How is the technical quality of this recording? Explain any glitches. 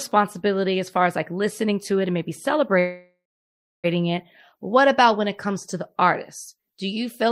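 The recording has one clear glitch, a call audio freeze, between 2.79 and 3.86 s, right after "to it and maybe". The sound stalls and the last instant is stretched into a fading buzz that drops to silence for about 0.64 s of the roughly 1.04 s gap. The likely cause is packets held up in transit, so the receiver's jitter buffer ran dry and it padded the wait. When delivery resumed, the audio picked up exactly where it stopped, with nothing lost, just a 1.04 s delay inserted.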